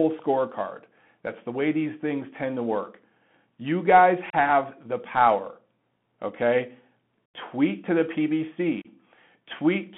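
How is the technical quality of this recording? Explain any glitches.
The recording quality is poor: it is narrowband speech over a Bluetooth headset link, with three brief dropouts.

Throughout, the Bluetooth CVSD headset codec limits the band to roughly 150 Hz to 3.4 kHz, which fits a 64 kbps CVSD link. Its one-bit delta coding can't keep pace with sharp, loud high content, so s sounds scratch and granular hiss sits underneath. That grainy slope-overload texture sets it apart from the smearing of transform codecs.

The three dropouts come from unconcealed Bluetooth headset packet loss. The first, at 4.30 s just before "the power", lasts about 30 ms. At 7.26 s the gap runs about 83 ms, likely a run of roughly ten lost packets, and at 8.82 s another of about 30 ms. Lost packets were replaced by silence or an idle pattern rather than smoothed over, so each hole has abrupt edges and the sound returns briefly quieter. 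Concealed loss would smear or repeat sound instead.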